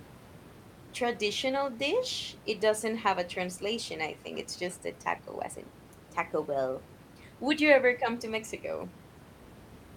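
There are no technical faults to describe in time order in this speech clip, and the room noise sits about 19 dB below the speech.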